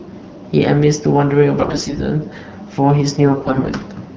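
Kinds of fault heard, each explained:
AMR bit errors: On a weak link, the less protected bits of the AMR-WB frames arrived corrupted while the checksum on the core bits still passed, so the decoder misplaced its excitation pulses and mis-set fine pitch, gain and spectral values. Pitch and level hold roughly steady, but the speech turns hoarse, scratchy and gargly, most heavily from 1.57 to 2.06 s and more mildly from 3.19 to 3.82 s.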